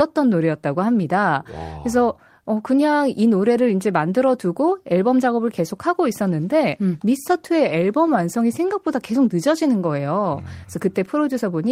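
Speech recording with no audible technical faults.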